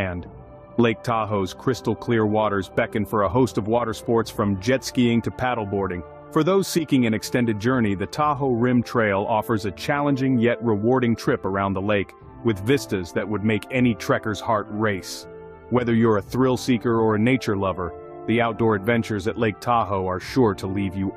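No technical faults are audible.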